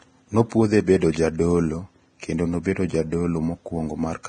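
The whole clip carries heavy lossy-codec damage, likely Vorbis compression: the speech sounds hissy and grainy, nothing survives above 9.7 kHz, and the treble has turned to coarse noise, which fits a low bitrate of around 23 kbps.

There's also pre-echo at 0.49 s and again at 1.12 s. A short hiss of about 23 ms and 25 ms respectively creeps in just before sharp attacks, because the codec's noise smeared backwards across the quiet stretch, leaving those onsets soft and blurred.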